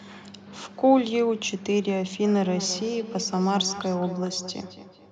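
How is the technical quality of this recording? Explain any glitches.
The recording has one clear problem. From 2.35 s to the end, there is feedback echo between two devices. A second device in the room replays the call, and this microphone recaptures it. The local echo canceller cannot remove that sound. The speech returns about every fifth of a second, thinner and ringing, at about 13 dB below the speech at its loudest.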